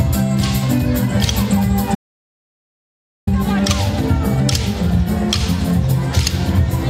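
The sound cuts out abruptly at 1.95 s into dead silence with no room tone, returning at 3.27 s: an audio dropout to silence, likely from a lost input link.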